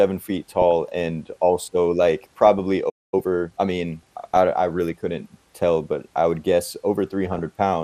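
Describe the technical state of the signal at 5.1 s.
At 5.1 s, as throughout the clip, the speech likely passed through MP2 compression at a starved rate, fitting roughly 80 kbps, switching off upper sub-bands and leaving a dull, gurgling, granular sound.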